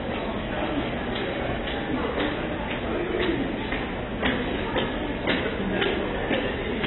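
Throughout the clip the sound is dull and band-limited, with nothing above 4 kHz, and sustained parts carry a warbling, fizzy smear. The damage is heavy, likely from AAC compression at a very low bitrate, around 16 kbps, lowering the cut-off and quantising coarsely.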